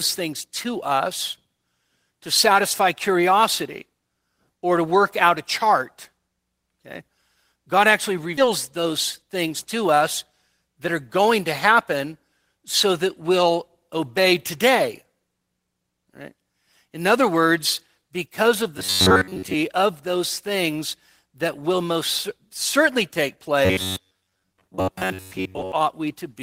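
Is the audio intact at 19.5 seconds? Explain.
No. From 18.78 to 19.54 s the speech turns into robotic sound from repeated short buffers: a rigid metallic buzz at 93.8 Hz, likely from a roughly 10.7 ms chunk looping for most of that stretch. The waveform shows identical repeating cycles, and the spectrogram shows even harmonic stripes spaced 93.8 Hz apart.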